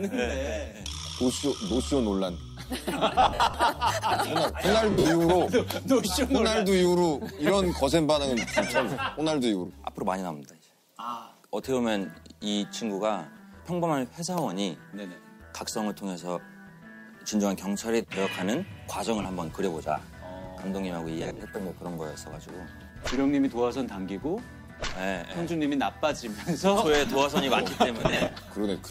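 Lost LE Audio frames at 3.22–3.54, 4.91–5.05, 19.22, 21.20–21.40 and 27.99–28.33 s: the LC3 decoder reuses the last spectrum with random signs and fades it. Tones smear into noise, showing as blurred, dimming bands on a spectrogram.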